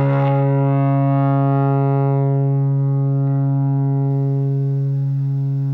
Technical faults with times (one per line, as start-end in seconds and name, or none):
4.11-5.73 pre-emphasis left on